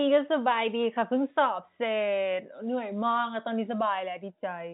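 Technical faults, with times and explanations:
No technical faults heard.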